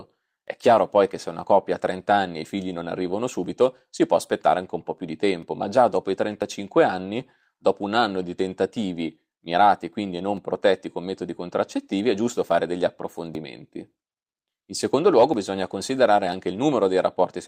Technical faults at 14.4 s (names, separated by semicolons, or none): periodic USB or driver dropouts